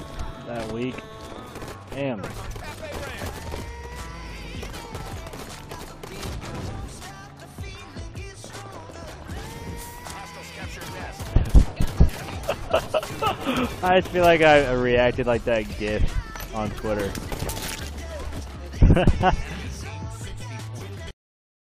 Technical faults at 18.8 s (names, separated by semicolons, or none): damaged data in a compressed stream